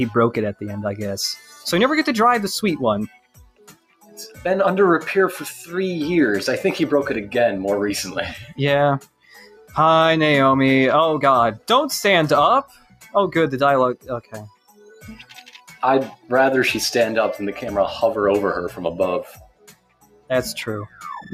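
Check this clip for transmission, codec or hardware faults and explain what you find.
The level pumps and thins throughout: steady, held and fading parts keep sinking while sudden onsets mostly come through, a swing of around 10 dB. This is a noise suppressor applied to music or sounds. A processor tuned for speech treats sustained tones, ambience and decay as background noise and turns them down, so the texture flutters and tails are shortened instead of ringing out naturally.

Sound cut by the noise suppressor shows up as distinct dips in seven places: 1.4–1.65 s (about 7 dB), 3.08–4.17 s (about 18 dB), 9.0–9.75 s (about 18 dB), 12.64–13.14 s (about 16 dB), 13.95–15.05 s (about 18 dB), 15.56–15.75 s (about 9 dB) and 19.26–20.3 s (about 18 dB). In each, the sustained material sinks or cuts off early, because the suppressor classed it as noise and attenuated it more heavily than the surrounding audio.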